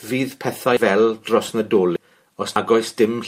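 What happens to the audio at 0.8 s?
At 0.77 s the speech jumps abruptly. About a tenth of a second of sound is missing, and the audio on either side is butted together with no gap of silence. The likely cause is a dropped buffer (overrun). The recording software did not read a block of samples in time, so the hardware overwrote it. That block was lost, and the stream skipped straight ahead.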